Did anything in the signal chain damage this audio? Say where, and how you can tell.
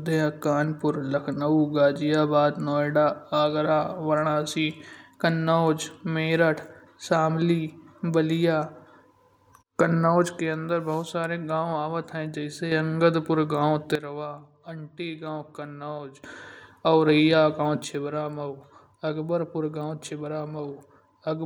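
Yes, sudden gain jumps: speech and noise drop together about 6 dB at 10.40–12.72 s, about 12 dB at 13.95–16.24 s, and about 6 dB from 17.84 s. That's likely an unramped digital gain change in processing.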